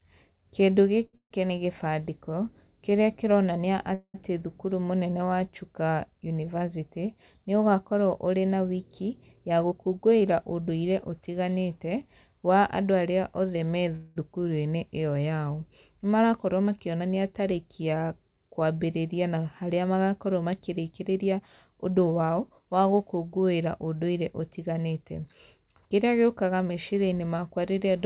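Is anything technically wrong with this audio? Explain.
Yes. There are three kinds of fault, all from packets arriving unevenly over a call path. The band stops at 4 kHz throughout, which fits a G.711 A-law call codec.

Short stall from a late packet, 1.06 to 1.15 s: a packet missed its slot, the jitter buffer emptied, and the receiver stretched the last sound for 70 ms until the packet came, then resumed where it left off. The sound hangs slightly too long with a faint buzz. On a spectrogram the harmonics run flat and unchanging for that stretch, and the waveform shows a repeating cycle instead of evolving detail.

Call audio freeze at 1.17 to 1.33 s, 3.95 to 4.16 s and 13.96 to 14.18 s: a longer wait for delayed packets likely caused these. The receiver fills 134 ms, 194 ms and 200 ms by continuing the last sound as a fading buzz. The first two decay into silences of 90 ms and 60 ms. The third never reaches silence. 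Nothing is lost, but pauses are inserted. On a spectrogram each freeze appears as a smeared, fading band, sometimes followed by a blank gap, and the waveform shows an envelope that tapers away.

Jitter buffer speed-up at 9.40 to 10.22 s, 16.23 to 17.10 s and 20.38 to 22.73 s: after the backlog, the buffer holds more audio than it needs, so the receiver trims pitch-period-sized slices over and over. Playback runs at 109 to 110 percent speed. Roughly 70 ms, 100 ms and 0.2 s are removed in the three stretches. Pitch stays put while the speech sounds hurried. A spectrogram shows compressed syllable timing with unchanged harmonic spacing.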